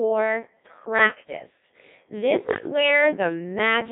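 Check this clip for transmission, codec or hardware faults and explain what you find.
The speech has passed through the Codec 2 vocoder for its whole length. Rather than keeping the waveform, the encoder sends only pitch, voicing, energy and a coarse spectral envelope, and the decoder rebuilds the voice from sine waves. The damage here is heavy, consistent with a rate near 1.6 kbit/s. The result is robotic, buzzy speech with smeared detail, squeezed into a line band of 150 Hz to 3.6 kHz.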